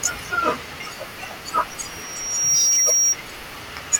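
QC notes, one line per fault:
1.80–3.17 s loudspeaker feedback squeal: a 5.7 kHz tone swells over roughly 0.7 s to about 10 dB above the speech as the microphone-loudspeaker loop runs away.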